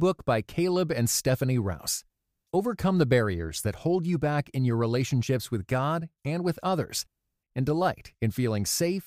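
No technical faults are audible.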